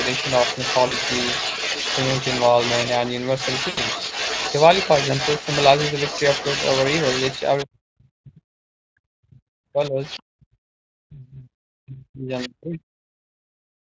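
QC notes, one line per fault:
Throughout: Speex codec damage, plainly audible. At around 20.6 kbps the CELP coder has too few bits for the excitation, so the speech sounds grainy and hoarse.
0.0 to 7.65 s, 9.84 to 10.22 s and 12.38 to 12.49 s: other side's voice leaking through. A second voice sits under the speech, at about 5 dB below it at first, then about 15 dB and 10 dB below in the later scraps. This is likely loudspeaker echo the canceller failed to remove.
0.87 to 0.94 s and 3.69 to 3.80 s: VoIP packet loss concealed by the speech codec. Gaps of 40 ms and 80 ms are filled by the decoder repeating its last pitch and filter with falling gain. The speech smears into a brief, fading sound.
7.64 to 8.6 s, 8.95 to 12.88 s and 13.55 s to the end: speech suppressed in double talk. The talker's speech dips deeply, by roughly 40 dB at worst. Both sides were talking at once. The likely cause is the echo canceller turning everything down because it could not separate near speech from echo.
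13.16 to 13.27 s: background gated by the echo canceller. The room sound drops out for about a tenth of a second, by about 35 dB, then returns. The canceller clamped the microphone while the loudspeaker played, and released it afterwards.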